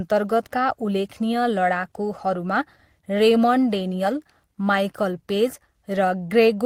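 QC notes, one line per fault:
No faults found.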